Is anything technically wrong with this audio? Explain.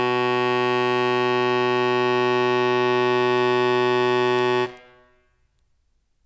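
No, nothing in this music clip points to a technical fault. It can be heard as intended, with nothing in the playback calling for an explanation.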